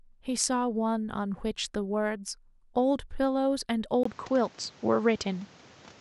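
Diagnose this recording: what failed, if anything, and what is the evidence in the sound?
At 4.03 s the system likely switched its input to a poorer device, a fault at the driver and device-routing stage. A gap of 20 ms in the speech marks the switch. From there to the end, nothing is left above 8 kHz, so the voice turns dull and boxy. A new background noise, roughly 30 dB below the speech, comes in, and the level shifts by a few decibels, because the second device has its own bandwidth, gain and noise.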